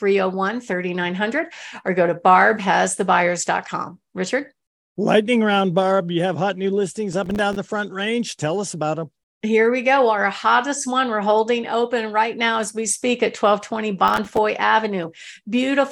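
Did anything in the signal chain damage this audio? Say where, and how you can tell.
Yes: processor overload crackle at the driver/buffer stage, 7.13 to 7.56 s (between "have hot new listings" and "the front range tell") and 14.08 to 14.38 s. An overloaded processor missed a run of buffer deadlines a few milliseconds apart. Each miss left a hard-edged silent gap, so the speech turns gritty and crackling until the load eases.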